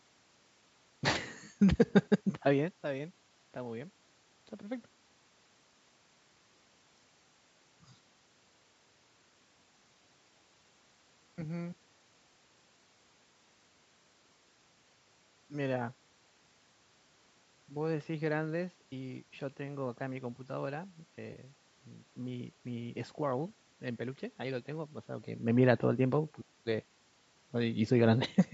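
At 21.33 to 21.36 s there is AAC frame loss with concealment: a brief patch where the speech smears into a noisy, phasey blur before detail returns. About 20 ms of coded audio went missing, which fits two short frames of roughly 10 ms each, likely from low-delay AAC. The decoder bridged the gap by reusing the last good spectrum with altered phase, so the loss is too short to fade toward silence.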